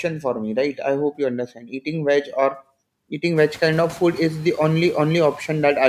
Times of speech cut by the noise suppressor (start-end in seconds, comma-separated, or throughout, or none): 1.47-1.73